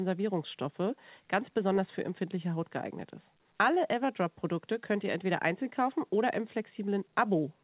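No technical faults can be heard anywhere in this speech recording. It came through a WebRTC call path that works as intended, with the narrowband sound of a G.711 A-law telephone codec and nothing above about 4 kHz.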